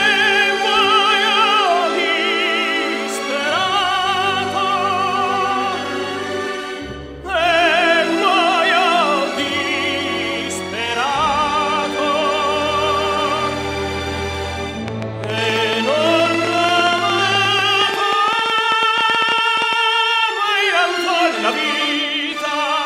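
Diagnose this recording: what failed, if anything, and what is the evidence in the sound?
A train of clicks, 14.88 to 19.74 s: irregular pulses near 11 per second, well above the sound, vertical spikes on waveform and spectrogram; likely analogue-wiring interference.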